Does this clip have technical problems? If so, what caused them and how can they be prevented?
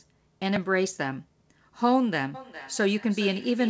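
Yes. A repeated buffer at 0.56 s shows up as a brief click or buzz rather than an audible stutter. New audio failed to reach the playback device in time, so it replayed its most recent buffer twice more, with a hard edge at each join. The repeated piece is only about 1.33 ms long, which fits a 64-sample buffer, and essentially no audio is lost. Giving the audio thread higher priority or a slightly larger buffer would stop the device running dry.

A feedback echo between two devices runs from 2.34 s to the end. A second device in the same room is on the call and plays back this microphone's signal. The microphone picks that playback up and sends it out again, and neither echo canceller removes sound from the other device's speaker. The sound returns at an interval of around 400 ms, thinner each time, peaking about 17 dB below the direct speech. Muting the speaker and microphone on all but one device in the room prevents the loop.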